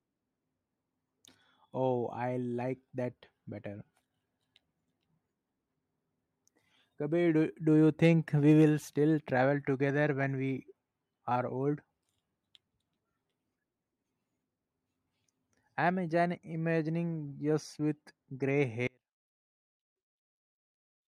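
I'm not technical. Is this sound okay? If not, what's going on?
No. At about 18.87 s, just after "with grey", the speech suddenly drops out and stays gone to the end, leaving only a very faint trace underneath. That's an audio dropout to a faint residue, likely the signal feed cutting while the recording kept running.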